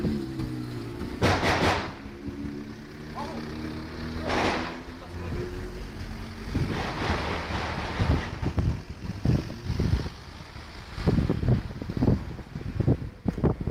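No technical faults can be heard anywhere in this audio.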